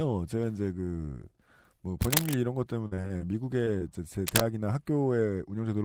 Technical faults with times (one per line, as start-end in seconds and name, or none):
2.00-2.35 cable scratch noise
2.87-3.24 repeated packet loss (robotic sound)
3.65-3.83 short concealed packet loss
4.27-4.45 cable scratch noise